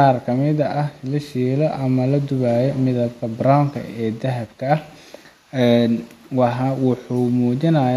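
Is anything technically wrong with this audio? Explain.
No, nothing technically wrong stood out on listening to this speech recording.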